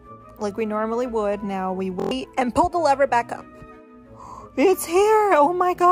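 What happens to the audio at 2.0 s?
A rapid, buzzy stutter from 2.00 to 2.11 s: a system hang loop, where a 23.22 ms slice repeats five times at 43.1 Hz while about a tenth of a second of audio is lost.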